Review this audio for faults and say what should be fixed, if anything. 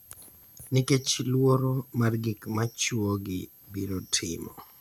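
A switching supply whistle runs under the speech throughout: a faint high tone wandering between about 12.4 and 12.5 kHz, roughly 30 dB below the voice. It comes from a power supply's converter switching in an audible burst mode. On a spectrogram it forms a thin, slightly wavering horizontal line near 12.4 kHz across the whole clip. Preventing it means powering the recording chain from a linear or well-filtered supply, or moving the switching adapter away from the signal path.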